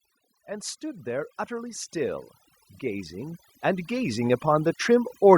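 Across the whole speech clip, overdone noise removal applies too much suppression, pulling frequency bands near the noise estimate far down, leaving twinkling specks in near-silence. From 0.3 to 2.24 s, then 2.81 to 5.23 s, automatic gain rising lifts voice and background together, by about 6 dB and about 8 dB, as the control compensates for quiet input.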